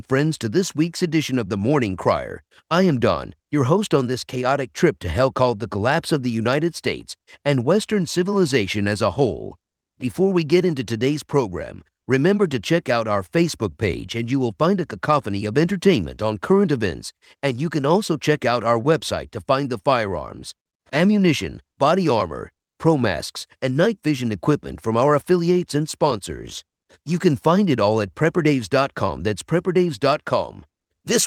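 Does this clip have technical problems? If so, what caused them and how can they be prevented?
No, the speech signal holds steady for its whole duration, with nothing in it that calls for a cause or a preventive step.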